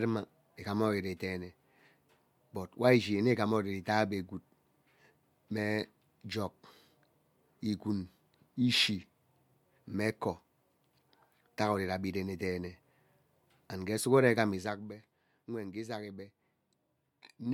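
From 14.55 to 14.89 s, a rapid ticking rides on the speech while its level falls by roughly 10 dB. This is zipper noise. The gain was lowered in 1 dB steps with no smoothing between them, and each jump puts a small click into the waveform. The steps arrive at around fifty per second, which points to the gain being updated once per processing buffer of about 20 ms and gives the fast zipping texture.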